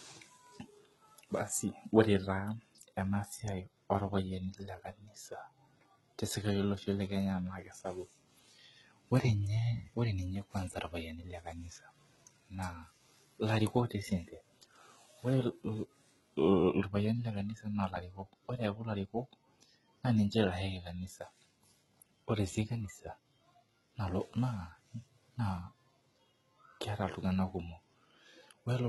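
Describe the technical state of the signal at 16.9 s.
At 16.9 s the speech carries heavy damage from what is likely HE-AAC compression. It runs through the whole clip, not just this moment. The lower band sounds coded in the normal way. The treble above it is rebuilt by copying lower bands upward under a rough envelope. Its harmonics fail to line up across the join, so s sounds turn gritty, metallic and lispy. The depth of damage fits a very low bitrate, around 16 kbps.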